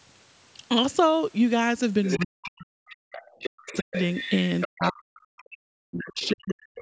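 At 2.04 s a second voice starts bleeding in under the talker, only about 5 dB down, and it runs to 2.5 s. That's the other side's voice leaking through, likely far-end audio from the loudspeaker that the echo canceller didn't fully remove. It comes back from 3.12 to 4.89 s, a bit quieter at about 10 dB down, and once more from 6.21 to 6.8 s, fainter still at around 15 dB below the speech.

Overlapping that, the talker's own speech gets knocked down from 2.22 to 3.95 s, dipping and cutting out in pieces for about a second and a half in total, with the deepest drops around 40 dB. It happens again from 4.65 s right to the end of the clip, roughly two seconds' worth. This is speech suppressed in double talk, likely the canceller failing to separate the two voices and turning both down. The call microphone processing tops out at 8 kHz.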